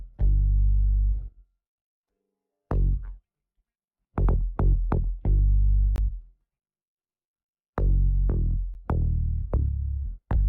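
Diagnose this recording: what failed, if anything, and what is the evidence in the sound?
A short hole at 5.96 to 5.98 s (a 20 ms gap) and a tick at 8.74 s (10 ms). This is a block of digital silence at the driver or buffer stage: the output buffer likely went unfilled, leaving zeros with abrupt, unfaded edges.

A short glitch near the end, at 10.35 to 10.37 s, points to damaged data in a compressed stream at the codec or storage stage. Corrupted bytes made the decoder misread those frames, lose sync and hunt for the next valid frame header.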